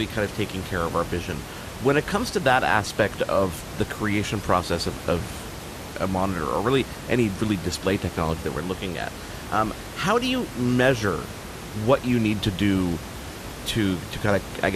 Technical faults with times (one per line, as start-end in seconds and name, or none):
0.00-14.76 MP2 compression